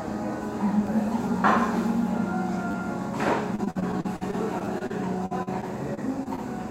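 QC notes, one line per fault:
0.87, 2.71–2.74 and 4.65–4.67 s: repeated buffer. Short slices replay one, three and two extra times, fitting a 10 ms buffer. Each repeat is heard as a click or brief buzz.
3.55–6.39 s: repeated packet loss (robotic sound). Gaps recur, the longest about 50 ms. Most are patched by stretching the last sound, so it turns choppy.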